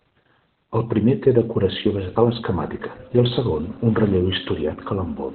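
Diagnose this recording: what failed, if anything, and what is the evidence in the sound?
The codec stage failed: Opus voice compression ran at very low rate in its SILK linear-prediction mode, which fits about 8 kbps narrowband coding. Throughout, nothing survives above 4.2 kHz, so the speech is muffled, with coarse excitation coding leaving it hoarse and faintly robotic.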